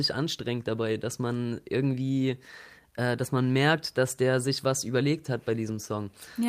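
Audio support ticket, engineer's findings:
Lost packet rebuilt from error correction, 5.67 to 5.77 s, right after "sich was überlegt hat". Network dropped packets. Opus decoder replayed the low-bitrate in-band FEC copies carried in the following packets. About 60 ms rebuilt, which fits three 20 ms frames. Symptom: no gap, but the speech turns briefly rougher and grainier, with added noise.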